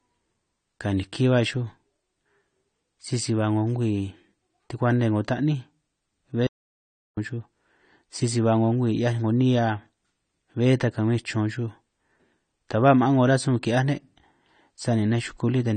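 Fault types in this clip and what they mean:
AAC compression: The whole clip has plainly audible codec damage, with nothing above 9 kHz, so the speech sounds dull and smeared. That's likely low-bitrate AAC-LC, consistent with something around 32 kbps, where the encoder drops the top band and coarsely quantises what remains.
Audio dropout to silence: From 6.47 to 7.17 s the audio just stops for about 0.7 s, with dead silence and no room tone underneath, then picks back up mid-flow. That's likely the input being lost while recording carried on, so whatever happened there is gone.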